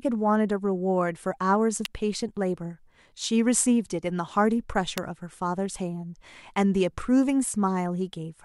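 At 1.85 s you get a sharp snap sitting on top of the speech, and another at 4.98 s. Both are electrical switching spikes, the second one louder, peaking around -5 dBFS against roughly -10 for the first. They're very brief, a few milliseconds at most, with a click character rather than a pop. That's most likely a nearby switch or motor arcing and the audio line picking the discharge up.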